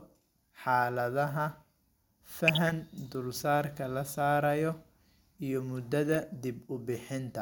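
At 2.48 to 2.72 s, just before "dulsaarka la", DAB burbling breaks over the speech: short blips of noise in individual sub-bands, with sub-bands jumping in level for up to a frame. Weak reception let bit errors slip past error correction and corrupt MP2 samples and scale factors, which fits around a dozen damaged frames. A shorter burst at 6.12 to 6.24 s comes from roughly twice the error rate.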